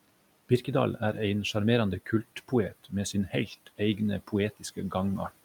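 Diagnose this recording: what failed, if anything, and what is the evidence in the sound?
Speech cut by the noise suppressor, in call processing: at 2.71–2.92 s, 3.13–3.49 s and 4.57–4.92 s, the speech dips by about 15, 10 and 16 dB for roughly a tenth of a second each. Quiet speech was judged to be room noise and attenuated with it, so it sounds swallowed. The waveform envelope collapses and the spectrogram thins.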